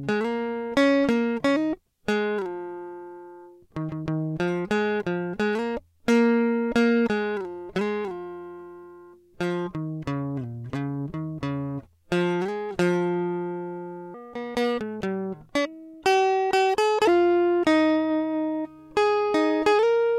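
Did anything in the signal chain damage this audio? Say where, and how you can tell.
Yes. From 14.14 s to 17.07 s the music runs at 1.37 times its proper speed: tempo and pitch jump together at 14.14 s, with everything sitting roughly five semitones higher and hurried, then drop back at 17.07 s. This is a section at the wrong speed. Because pitch and timing move in lockstep, with no time-stretch artefacts, the likely stage is playback or editing, where that segment was read against the wrong sample clock.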